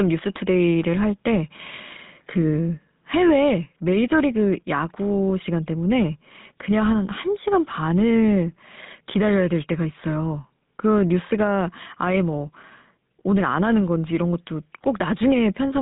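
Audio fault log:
Throughout: GSM full-rate codec. The speech has the buzzy, gravelly roughness of the original GSM coder at 13 kbps, which models the vocal tract and excites it with a regularly spaced pulse train built from only every third excitation sample. The line band runs from about 150 Hz to 3.7 kHz, and nothing survives above 3.8 kHz. The grainy buzz on voiced sounds sets it apart from a simple telephone band-limit, which would sound muffled but smooth.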